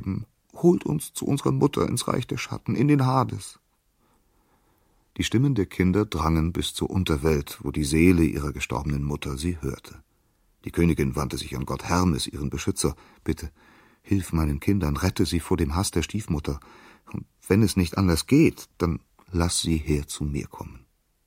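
Nothing stood out as a technical fault on listening.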